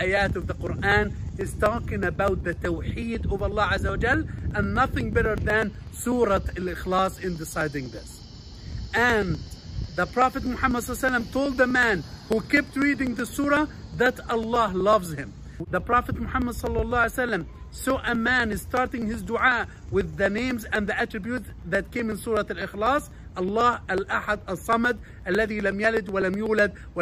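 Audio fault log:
0.17–26.96 s, periodic USB or driver dropouts: roughly a millisecond of audio is skipped every 0.124 s, about eight times a second, some two hundred times in all. Each splice joins mismatched waveform edges, producing a steady train of ticks wherever signal is present.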